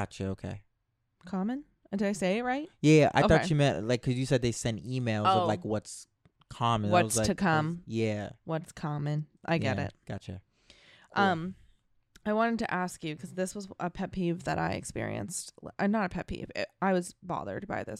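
No technical faults are audible.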